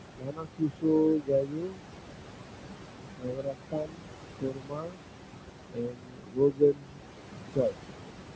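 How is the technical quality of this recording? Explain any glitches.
Heavy noise suppression is the main problem: the background pumps in and out, and parts of the speech are pulled down with it.

Noise suppressor artifacts run through the whole recording. Between phrases the room noise drops away, then swells back under the speech. The suppressor judges each frequency band frame by frame, and where it decides a band holds only steady noise it cuts it by about 22 dB. That level is set against room noise sitting only about 9 dB below the speech.

The speech cut by the noise suppressor falls in five places: 0.17 to 1.81 s, 3.18 to 4.09 s, 4.41 to 4.99 s, 5.7 to 7.05 s, and 7.55 to 7.75 s. In these stretches the speech sounds swallowed and faint. The longest, at the start and from 5.7 s, each lose around a second and a half of material in total. Quiet consonants and soft endings resemble the steady background closely enough that the suppressor treats them as noise, lowering them by about 22 dB, and about 21 dB in the last short dip. 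The call's microphone processing shows as a top end that stops at 8 kHz and the lowest bass taken out, which is normal.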